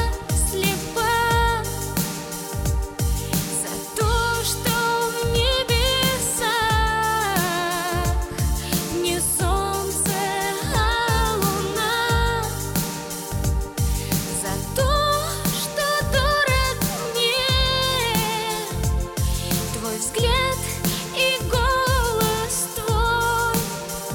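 No technical faults can be heard anywhere in this audio. Nothing in it calls for a time, a value or an explanation.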